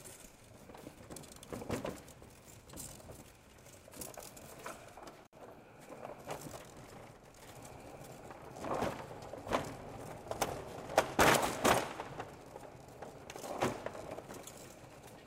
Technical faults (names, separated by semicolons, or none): intermittent contact